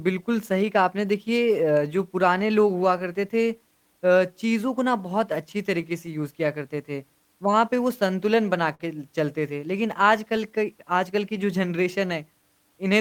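Throughout the speech, clock drift between sender and receiver is present: the sender's clock runs roughly 4 percent slow, so the receiver's jitter buffer keeps draining and must be topped up, giving small recurring timing hiccups at uneven intervals.

From 0.52 s to 12.70 s, repeated timing corrections stretch the sound to about 97 percent speed. The receiver repeats short pieces to stay in step, adding roughly 400 ms overall. This is heard as slight stutters and an unsteady tempo.

Scattered short gaps occur between 2.19 s and 3.48 s, where about three tiny losses totalling around 20 ms, the longest about 10 ms, were patched by continuing the preceding sound. Between 8.43 s and 11.71 s, roughly seven more gaps appear, the longest about 50 ms.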